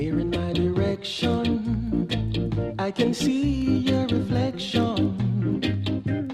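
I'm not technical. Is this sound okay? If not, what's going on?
Yes, it's fine: I listened all the way through and nothing in it sounds broken or out of place, so there's nothing here you need to worry about.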